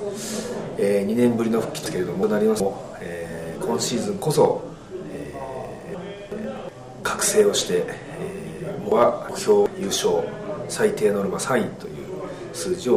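Jumbled moments at 1.86–2.60 s, 5.94–6.69 s and 8.92–9.66 s come from chunks out of order: each 0.37 s block plays one chunk late, swapping places with its neighbour.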